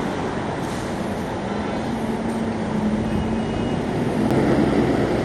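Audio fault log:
4.30 s, CD skip: right near the end you get a tiny tick and a brief dropout of only a few milliseconds, then the audio carries on from a different spot instead of where it left off. That's the laser getting knocked or tripped by a flaw and landing on another turn of the disc's spiral. The player mutes for a moment while it relocks, so the tick is the mute and the discontinuity is the jump.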